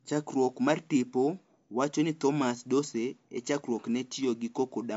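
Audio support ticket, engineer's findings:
MP3 compression across the whole clip. Top end stops dead at about 7.6 kHz, so the speech sounds dull and the s sounds lose their hiss. There's a plainly audible swirly, watery texture throughout. Likely a low-bitrate MP3 encode, something like 48 kbps. The encoder ran short of bits, cut the treble at a fixed frequency, and dropped weak frequency lines that flicker on and off from frame to frame.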